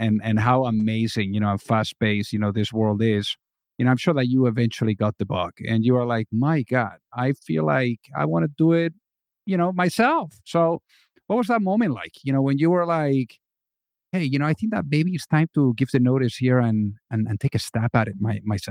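Nothing here needs flagging: the speech runs along without a single technical fault worth pointing out.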